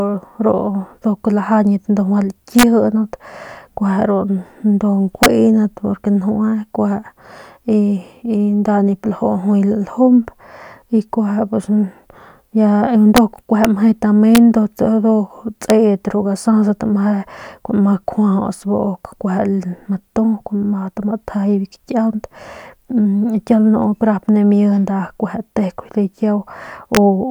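A speech recording with integer overflow: loud peaks exceeded the largest integer and wrapped to the opposite sign instead of being limited, producing violent cracks far sharper than clipping at 2.59–2.63, 5.23–5.26, 13.17, 13.65, 14.35–14.38, 15.70 and 26.95–26.97 s, with peaks up to about 3 dB over the limit.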